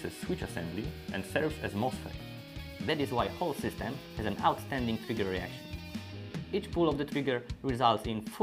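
From 2.89 s to the end, a wrong sample rate plays the audio about 1.09 times too fast and about 1.47 semitones high, which fits 44.1 kHz material played at 48 kHz. Unlike a pitch shift or time-stretch, speed and pitch rise together.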